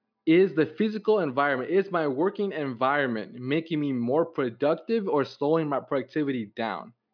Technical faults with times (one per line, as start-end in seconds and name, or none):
none